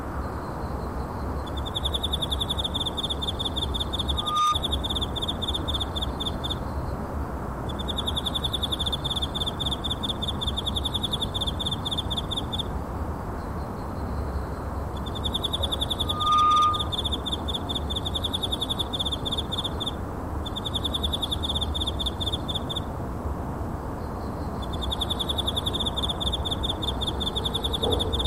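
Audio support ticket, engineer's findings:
Loudspeaker feedback squeal, 4.11–4.57 s and 15.99–17.02 s. Single 1.2 kHz tone swelling over roughly a third of a second to a few dB, then around 10 dB, above the sound. Mic picking up its own loudspeaker, loop gain above unity at 1.2 kHz.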